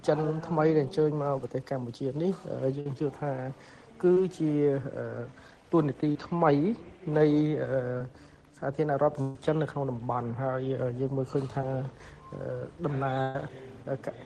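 At 2.80 to 2.86 s there's a burst of packet loss, about 50 ms of audio that never arrived in time. The receiver carried the last bit of sound forward and let it fade, so you hear a brief held or smeared patch, and then the sound picks up slightly further along with that stretch gone. Shortly after, at 4.14 to 4.17 s, comes the first short concealed packet loss. Only a couple of hundredths of a second went missing, and the decoder patched over it by extending what it had before blending back. It comes across as a quick smear or wobble. The same thing happens at 6.12 to 6.16 s, the longest of these at about 30 ms, and again at 7.98 to 8.01 s. The two bigger bursts come later, at 9.22 to 9.36 s and 13.22 to 13.35 s, each about 130 ms lost. Those gaps are long enough that the stretched-out sound turns into a held buzz or fading hiss before the audio jumps back in, missing the part in between. 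The last short concealed loss, at 11.62 to 11.64 s, is a tiny 10 ms patch, just a momentary wobble. Everything went through a WebRTC call path with the Opus codec, which adds its usual coding noise, and the top end stops around 12 kHz.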